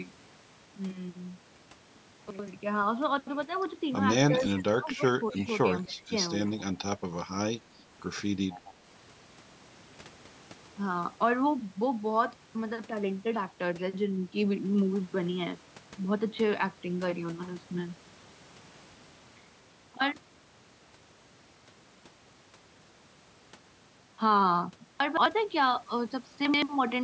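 At 2.30 to 2.48 s there are chunks out of order: one 85 ms chunk plays one chunk late, after the chunk that should follow it. This is not a dropout, because nothing goes missing. Instead, the sound briefly jumbles.

From 4.35 to 5.41 s, and again from 5.66 to 6.12 s, the talker's level falls away in pieces. The deepest dips are about 20 dB and then about 15 dB, covering roughly half a second and a fifth of a second in total. This is likely speech suppressed in double talk, with the echo canceller turning the talker down while the other side spoke. It comes and goes in patches rather than fading steadily, which sets it apart from a gain drop.

Echo leak arrives in scraps at 5.3 to 5.46 s, 5.92 to 6.02 s, 6.45 to 6.63 s and 8.51 to 8.71 s. A faint copy of the voice trails it by 254 ms, at about 20, 30, 25 and 20 dB below the speech. The likely cause is residual loudspeaker pickup sent back. 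The fixed, distinct delay separates it from room reverberation, which would smear continuously instead.

The chunks out of order return at 25.00 to 25.26 s, where a chunk lands two chunks late, and at 26.45 to 26.62 s, where one lands a single chunk late. Each gives the same brief jumbled moment.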